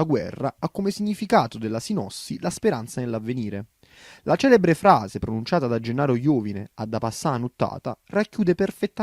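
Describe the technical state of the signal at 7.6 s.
At 7.6 s the speech signal is intact, with no audible technical fault at that moment.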